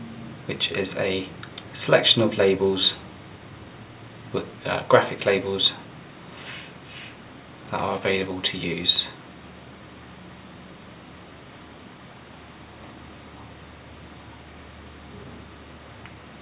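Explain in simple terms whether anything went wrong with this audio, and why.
Nothing went wrong with this audio, and no faults can be heard in it. It came through an ordinary call connection using the standard G.711 A-law telephone codec, which keeps only the sound below 4 kHz, so it has the narrower, phone-like quality you would expect from a normal call.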